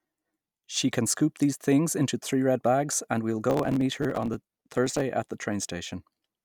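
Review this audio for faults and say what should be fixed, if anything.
From 3.50 to 5.01 s, between "bags and we will" and "at the", processor overload crackle tears through the speech. What sounds like around a hundred sub-millisecond buffers are skipped, each leaving a hard-edged jump. On a spectrogram these show as dense vertical broadband streaks, and in the waveform as notched discontinuities. Prevent it by giving the audio thread more headroom, with larger buffers or a lighter processing load.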